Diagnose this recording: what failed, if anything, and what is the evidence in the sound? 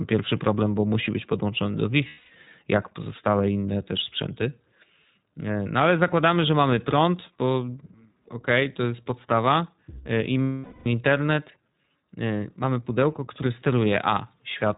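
The codec stage is at fault throughout. The speech is band-limited with nothing above 4 kHz and has a plainly rough, synthetic edge. That fits the iLBC codec in its 15.2 kbps, 20 ms frame mode, which codes each frame's excitation independently at narrowband rates.

Lost iLBC frames point to packet loss on the network. At 2.08 to 2.31 s (220 ms), after "musi być podłączony do" and before "jak pozostałe inne też", the sound becomes a held, buzzy vowel. At 10.42 to 10.86 s (440 ms), after "e i", the concealment repeats the last pitch cycle with noise and fades. The voice recovers almost at once after each gap.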